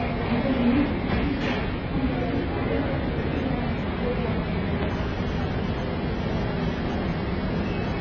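From start to finish the top end is simply gone, with nothing above about 7 kHz, and what's left sounds dull and smeared, with a warbly, fizzy texture on anything sustained or hissy. That's likely heavy AAC compression. The encoder has quantised the spectrum so coarsely that it lowered the cut-off and left gaps that get patched with substitute noise. Damage this heavy fits a bitrate around 16 kbps with AAC-LC.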